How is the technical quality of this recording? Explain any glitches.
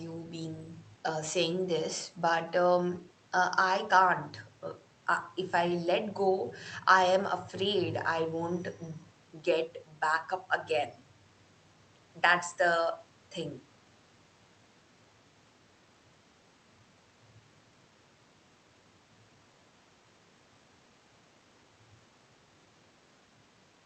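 No glitches can be heard in this recording. The sound shows the band-limiting of a call codec, with little energy above 8 kHz, and a faint room noise sits about 35 dB below the speech.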